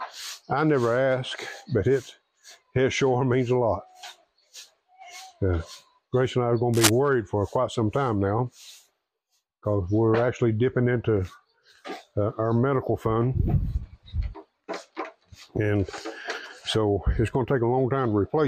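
At 6.74 s a short burst of cable scratch noise cuts in and lasts until 6.89 s, about 0.16 s in all. It is a dense, ragged crackle, roughly as loud as the sound it sits on. It rasps and rustles across the audio, then stops. The likely cause is a worn cable, connector or control being moved. Its contact resistance flickered rapidly, injecting uneven bursts of noise into the signal path.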